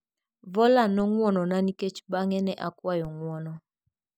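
A speech clip with two DC steps, at 0.997 s and 3.05 s, each heard as a brief low thump while the voice carries on unchanged. The waveform's zero line jumps abruptly at each point, then drifts back to centre as a roughly 20 Hz high-pass bleeds the offset away. On a spectrogram each step shows as a thin vertical broadband stripe, strongest at the bottom.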